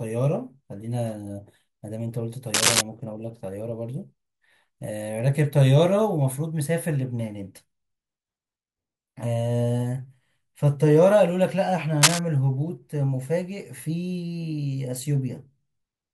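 Speech, interrupted twice by cable scratch noise: dense, uneven bursts of scratching from 2.54 to 2.81 s and from 12.02 to 12.19 s, a few decibels louder than the voice. The likely cause is a worn cable or connector shifting, its contact resistance fluctuating.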